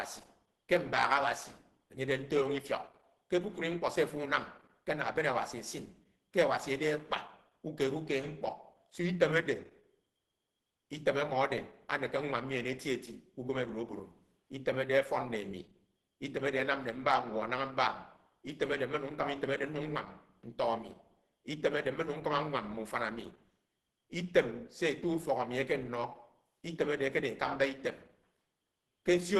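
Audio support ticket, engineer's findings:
Speech muffled, hoarse, whole clip. Nothing above about 12.1 kHz. Likely Opus compression at a low rate, fitting roughly 16 kbps. The encoder appears to be in hybrid speech mode, trimming bandwidth and noise-filling starved bands, which produces the hoarseness instead of swirl.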